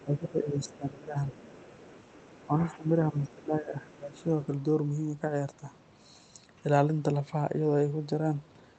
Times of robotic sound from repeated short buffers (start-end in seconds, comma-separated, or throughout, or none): none